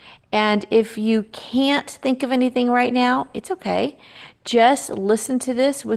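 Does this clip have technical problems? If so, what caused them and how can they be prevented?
Yes: Opus voice compression throughout makes the speech hoarse and slightly robotic while keeping full bandwidth, unlike plain low-pass muffling; this fits coarse coding at around 16 kbps. Encoding at 24 kbps or more prevents it.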